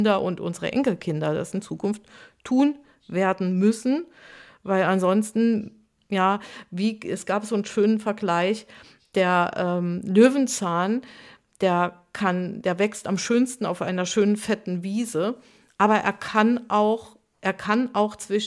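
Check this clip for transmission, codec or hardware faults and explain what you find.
No faults can be heard anywhere in this speech recording.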